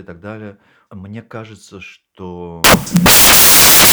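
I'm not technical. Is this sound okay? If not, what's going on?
No, not all the way through. From about 2.64 s to the end at 3.93 s, the speech gets swamped by loud hiss that sounds like harsh static. That's samples built from the wrong bytes: the player is piecing each tiny slice of the recording together wrongly, so the fast-flickering fine detail ends up dominating. The result is loud, harsh noise.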